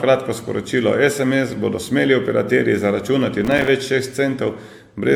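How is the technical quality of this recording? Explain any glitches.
The speech has a lasting codec problem and one short crackle burst.

Throughout, the speech sounds swirly, hollow and smeared, with softened consonant attacks. This is most likely generation loss: repeated AAC-LC re-encoding, perhaps five passes, each requantising on a new frame grid. That piles up more damage than a single encode at the roughly 96 kbit/s the sound suggests.

From 3.45 to 3.68 s, gritty processor overload crackle tears across the speech. Many tiny buffers, about 3 ms each, missed their deadlines in a row, with silence left in each gap. Unlike a single dropout, this is dense repeated chatter that stops abruptly once the load eases.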